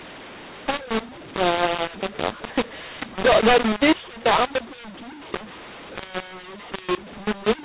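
From start to finish the speech carries a mu-law and A-law mix-up. The audio was encoded as G.711 mu-law but decoded as A-law. Levels come out scrambled, some too loud, some too soft. Quiet moments lift into noise. The speech sounds harsh and distorted.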